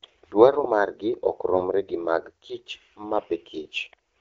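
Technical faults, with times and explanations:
1.49 to 1.67 s and 3.18 to 3.26 s, AMR bit errors: On a weak link, the less protected bits of several AMR-WB frames arrived corrupted while the core checksum still passed. Misplaced excitation pulses and wrong pitch, gain and spectral values make the speech briefly hoarse and gargly. The first burst, at a higher error rate, is rougher.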